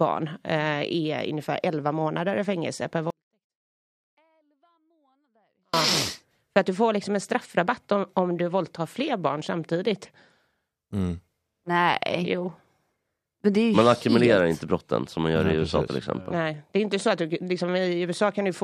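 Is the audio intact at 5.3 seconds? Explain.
No. At 5.3 seconds you're inside a 24-bit alignment error (too quiet) running from 3.10 to 5.74 s: 24-bit samples sit in the low bytes of 32-bit words but get read as full 32-bit integers, so the speech stays clean yet drops about 48 dB, nearly inaudible.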